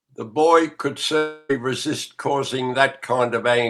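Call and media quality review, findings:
Long network dropout, 1.17–1.51 s, speech. About 0.32 s of audio lost. Receiver concealment stretches the last sound into a fading buzz across nearly the whole gap, with no fully silent stretch. Likely jitter buffer underrun after packet loss. Spectrogram shows a smeared, frozen harmonic band decaying in level, then speech resuming abruptly with content skipped. Waveform shows a repetitive, shrinking envelope instead of normal syllable shapes.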